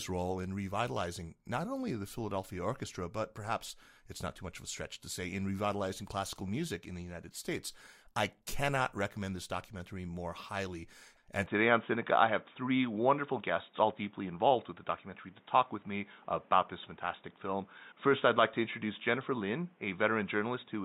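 At 11.46 s the recording system most likely switched its input to a poorer device, such as another microphone or a headset running its call profile, and stays on it to the end of the clip. From that moment the speech carries nothing above 3.8 kHz, its level shifts by around 5 dB, and a new background noise sits roughly 35 dB below the signal. The change is abrupt, with no silence at the switch.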